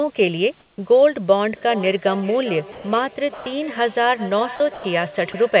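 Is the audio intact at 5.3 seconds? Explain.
No. At 5.3 s a feedback echo between two devices is still running; it began at 1.5 s and lasts to the end at 5.6 s. Two devices in the same room are joined to one call. One plays back what the other's microphone sent, and that microphone captures it again. Each device's echo canceller removes only its own playback, so this loop is never cancelled. The sound returns roughly every 0.4 s as a thinner, ringing copy, peaking about 15 dB below the speech.

From 5.32 to 5.34 s there is also a brief gap, most likely sound dropped by the voice detector. The sending side's detector seems to have treated this stretch as background and stopped transmitting for about 20 ms. The receiver filled that interval with comfort noise. About 10 ms of the actual sound is lost, so there is a momentary switch to steady noise before the signal resumes.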